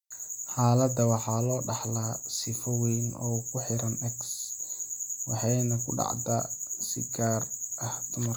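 No technical faults can be heard anywhere in this speech recording; the signal stays continuous and steady throughout.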